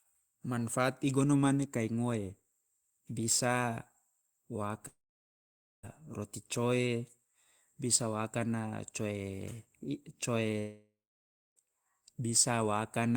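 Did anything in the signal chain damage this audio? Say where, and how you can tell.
Yes, at the network stage, a likely long network dropout: about a second of speech is missing at 4.87–5.85 s and 10.59–11.58 s. Each gap starts with a brief fading buzz and then goes silent for about 0.88 s and 0.63 s. On a spectrogram this is a smeared tail, then a blank band, then speech resuming abruptly.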